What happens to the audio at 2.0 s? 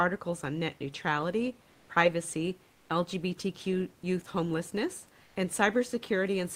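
Nothing goes wrong at 2.0 s; the speech carries on intact, with only the room's own background noise sitting about 33 dB beneath it.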